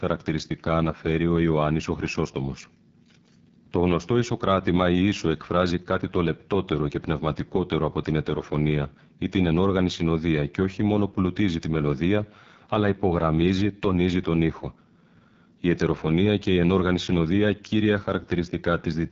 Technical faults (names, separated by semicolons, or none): AMR wideband (HD Voice) codec